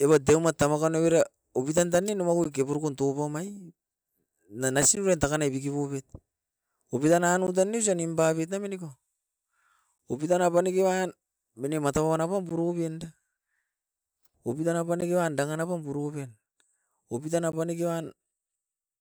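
Gap between chunks at 2.44, 4.95, 7.47 (just before "tan ne osa nimpaboit"), 9.98, 12.49, 15.01 and 17.52 s: the speech arrives in 2.5 s blocks with about 13 ms of silence inserted at each join, heard as brief holes or dips at a steady rhythm.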